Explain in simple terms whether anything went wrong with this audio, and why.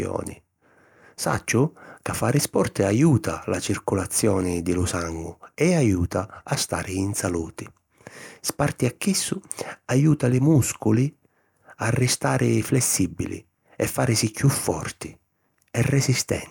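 Nothing went wrong here.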